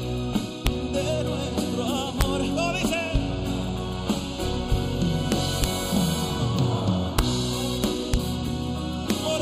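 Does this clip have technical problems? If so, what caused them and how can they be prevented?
Yes. Integer overflow: sums exceeded the largest integer and wrapped to the opposite sign, giving violent cracks at 0.67, 2.21, 5.32–5.64, 7.19, 7.84–8.14 and 9.10 s. To prevent it, use saturating arithmetic or wider accumulators so peaks clamp at full scale instead of wrapping.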